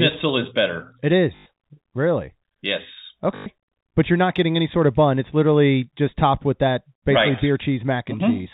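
A short robotic stutter breaks into the speech at 1.36 s and again at 3.36 s, each lasting 100 ms, the second just before "but you're not getting". Both are packet loss with the last packet repeated: the receiver replayed its final good packet until new data arrived, so each gap buzzes at about 50 Hz. That fits 20 ms packets, five per gap, over the narrowband G.711 telephone path.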